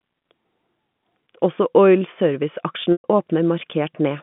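Packet loss with pitch repetition occurs from 2.92 to 3.04 s. About 120 ms of the telephone-band speech goes missing, which fits six 20 ms packets. The receiver fills the gap by looping the last pitch period, so a brief buzzy hold fades into silence before the speech cross-fades back in.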